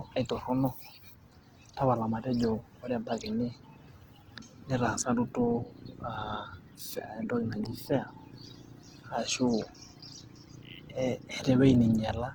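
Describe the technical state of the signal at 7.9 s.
At 7.9 s the speech carries Opus compression throughout, likely from a low bitrate around 16 kbps in music mode. Starved bands get folded or noise filling, so it sounds rough and grainy. A spectrogram shows speckled, smeared energy up to 20.2 kHz, with few holes.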